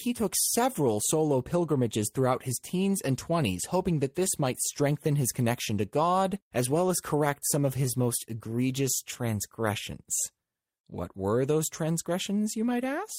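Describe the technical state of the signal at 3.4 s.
At 3.41 to 3.43 s, between "throughout his teens and" and "hoping that this might", there is a lost packet rebuilt from error correction. The sound points to a single missing 20 ms frame, filled from the low-bitrate copy carried in the following packet. There is no gap, but that stretch of speech sounds briefly rougher and noisier.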